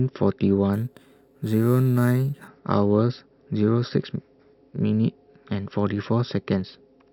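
Speech clip with imaging from sample-and-hold upsampling between 0.73 and 2.48 s: a metallic fizz at 6 to 12 kHz, about 27 dB down, which fits audio raised from 12 kHz without smoothing. Unlike steady hiss, it follows the speech level and moves opposite to pitch.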